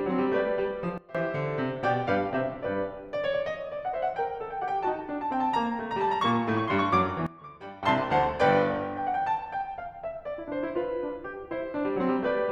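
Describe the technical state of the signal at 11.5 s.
At 11.5 s the music plays through intact, with no dropout, click, distortion or other fault to be heard at that moment.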